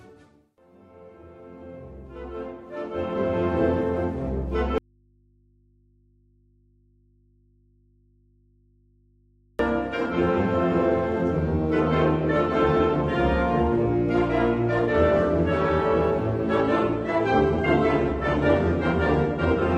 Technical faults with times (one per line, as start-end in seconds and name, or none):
4.78-9.59 audio dropout to a faint residue
16.63-19.78 adaptive stream at a lower bitrate